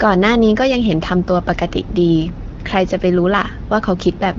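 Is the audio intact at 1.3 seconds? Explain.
Yes, the speech is intact at 1.3 seconds, with no fault at that moment.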